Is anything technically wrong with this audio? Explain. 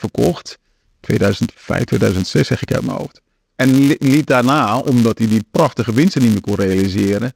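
Yes. A filter restarted on every block runs through the whole speech clip. The processing forgets its internal state at each block boundary and starts every block from silence, so each block opens with a small transient. These transients repeat at 188 Hz, which fits a 256-sample block, and come through as a steady buzz underneath the speech that rises and falls with its level.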